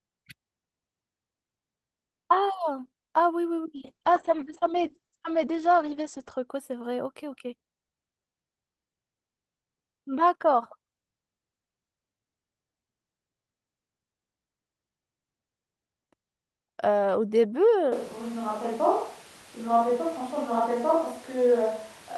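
From 3.77 s to 6.53 s there is a call bitrate drop. The encoder was starved of bits, and the sound turns rough and watery. The top end also closes in, from full band down to about 8 kHz, so the speech goes dull. The worst stretch lasts about 2.6 s. The sound points to a fall from around 32 kbps to roughly 9 kbps. Full detail returns at 6.53 s.

At 17.92 s the sound changes abruptly and stays that way to the end. The speech goes hollow and roomy, with thinner bass. It also drops in level by around 5 dB. Background noise rises to sit roughly 25 dB under the speech. This is likely a switch to a distant microphone, after the close one dropped out. The pickup now hears more of the room.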